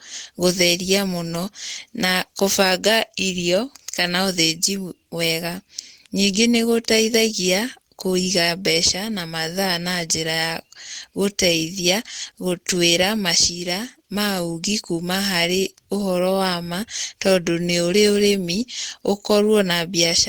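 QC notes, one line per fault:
Nothing to flag on this speech clip, so there's no fault line to log here.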